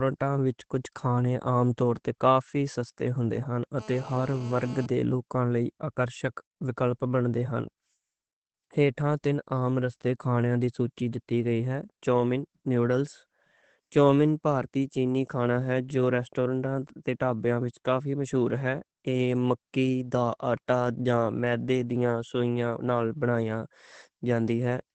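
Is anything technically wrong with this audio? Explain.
Yes. Two faults can be heard in this speech clip.

Opus voice compression runs through the whole clip. At 12 kbps the codec stays in its SILK linear-prediction mode with a wideband limit. It models the voice as a filter driven by a coarsely coded excitation, in 20 ms frames. Nothing survives above 8.5 kHz, so the speech sounds muffled. The thin excitation coding makes it hoarse and slightly robotic. The damage is plainly audible.

GSM phone buzz appears from 3.79 to 4.86 s. A nearby 2G phone on a call transmits radio bursts 217 times a second. The audio circuitry rectifies those pulses into the signal. The result is a hard, raspy buzz at 217 Hz, rich in harmonics, at about 20 dB below the speech. It holds steady while present and has no relation to what is being said.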